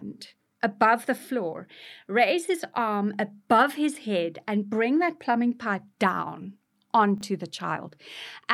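At 7.18 to 7.22 s the speech briefly jumbles: the chunks play out of order. A short piece of audio, consistent with a 10 ms chunk, arrives three chunks late and plays after material that should have followed it. Nothing is missing, but the reordering leaves three hard joins, heard as a quick garbled stutter. On a waveform the joins appear as abrupt discontinuities. On a spectrogram they show as thin vertical broadband lines, with formant tracks stepping out of sequence across that 40 ms span.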